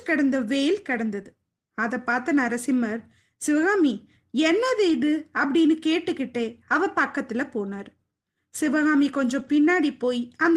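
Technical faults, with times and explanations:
4.89–4.95 s and 9.39–9.57 s, lost packet rebuilt from error correction: the network dropped packets, which fits two lost packets in the first case and about five in the second, but each following packet carried a low-bitrate backup copy, and the decoder played those instead of leaving silence. The sound never drops out. Instead, about 40 ms and then 100 ms of speech turn briefly coarse and noisy.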